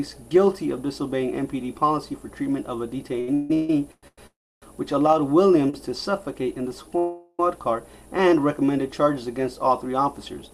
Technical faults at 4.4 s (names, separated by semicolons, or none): call audio freeze